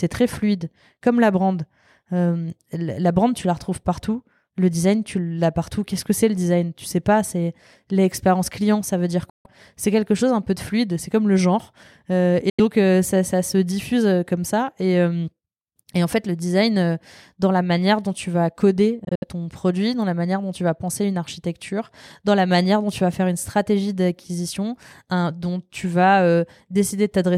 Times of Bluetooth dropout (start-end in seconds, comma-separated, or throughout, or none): 9.29-9.46, 12.49-12.60, 19.04-19.24